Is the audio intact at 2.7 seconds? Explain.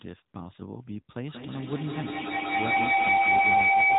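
No. A feedback howl runs from 1.27 s to the end. A microphone-to-loudspeaker loop gains level each trip. It builds a tone near 700 Hz, with repeats roughly every 200 ms, and peaks about 11 dB above the speech. The AMR narrowband mobile codec also applies. Nothing above 4 kHz passes, and the speech sounds buzzy and synthetic, which fits a rate near 10 kbps.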